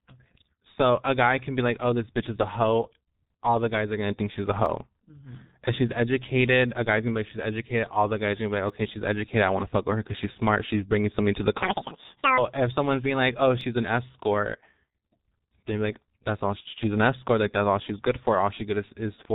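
The speech runs through the G.723.1 codec from start to finish, and the damage is heavy. Nothing survives above 4 kHz. The voice sounds muffled and hoarse. Consonants smear together. The coarse, slow-moving voice model points to a rate near 6 kbit/s.

At 4.66, 8.70 and 13.61 s, single sharp clicks cut through. Each is likely dropped samples, a fraction of a millisecond missing. The waveform jumps straight to a later value. Too little goes to lose any sound.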